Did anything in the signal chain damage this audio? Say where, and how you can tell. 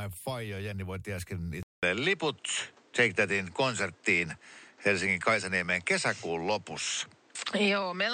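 Yes. At 1.63 s the speech drops out for 200 ms and returns duller, with a level shift of around 5 dB and a new noise floor roughly 35 dB down. A spectrogram shows a flat ceiling at 8.8 kHz from there to the end. This is likely the input switched to a poorer device at the driver stage.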